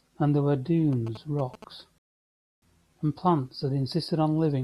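Speech, interrupted twice by separate faults. From 0.93 to 1.64 s there are GSM signalling bursts: a galloping dit-dit-dit of brief buzzes pitched at about 217 Hz, sitting roughly 15 dB below the speech. The pattern comes from a nearby 2G phone exchanging short groups of signalling bursts with the network; the audio circuitry rectifies the radio energy, so the burst repetition rate turns into an audible buzz. Then from 1.98 to 2.62 s a rebuffering stall drops the audio to silence. The player ran out of downloaded data and waited for more, and when playback picks up it continues exactly where it left off. No audio is lost, but the gap adds 638 ms to the clip's running time.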